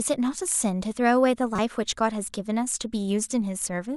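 A speech clip with one short glitch: from 1.56 to 1.59 s there's a corrupt frame decoded. A few damaged compressed frames got played anyway, spitting out a chirp, blip or burst of misplaced energy peaking around -15 dBFS.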